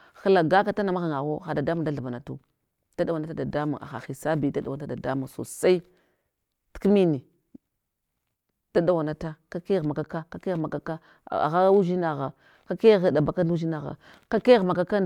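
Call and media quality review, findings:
No audible defects found in the speech recording across its full duration; nothing to report against capture, transport or playback.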